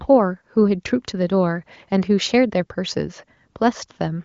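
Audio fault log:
No faults heard in this speech clip.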